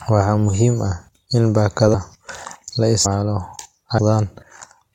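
Compressed frames skipped at 1.93 s, 3.04 s and 3.97 s: whole 23.2 ms frames were left out, so the speech jumps forward by about 150 ms, 300 ms and 400 ms.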